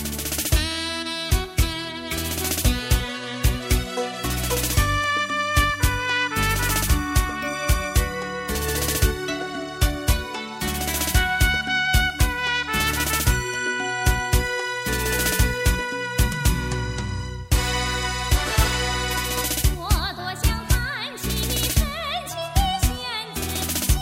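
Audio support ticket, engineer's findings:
No technical faults found on listening: level, timing and playback continuity all hold steady across the signal, with nothing audible to trace to a component.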